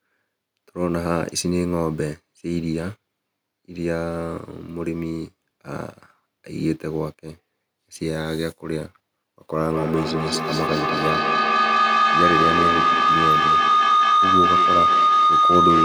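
From 9.6 s, a pulsing tone around 1.5 kHz swells about 6 dB above the speech: feedback howl, a mic-to-speaker loop gaining every pass.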